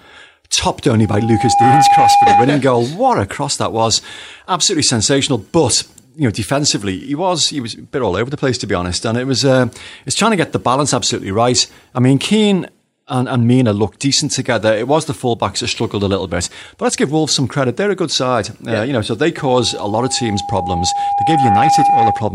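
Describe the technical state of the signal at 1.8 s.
At 1.8 s the microphone is picking up its own loudspeaker, and the loop gain at 808 Hz has passed unity, producing loudspeaker feedback squeal from 1.01 to 2.51 s. A pure 808 Hz tone swells over most of a second and rides a few decibels above the speech.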